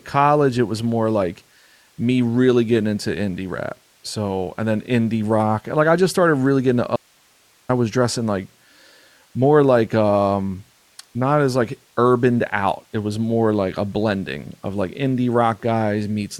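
At 6.96 s, just after "started really getting into", the speech cuts out abruptly and stays gone until 7.69 s, where it resumes with "I was dressing like". This is an audio dropout to a faint residue lasting about 0.73 s. The gap holds only hiss, roughly 40 dB below the speech level. The likely cause is the signal feed being lost upstream while the rest of the chain stayed live, so the gap carries the path's own noise rather than digital silence.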